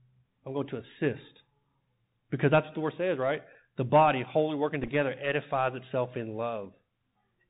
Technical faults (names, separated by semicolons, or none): Bluetooth CVSD headset codec; Bluetooth headset packet repeated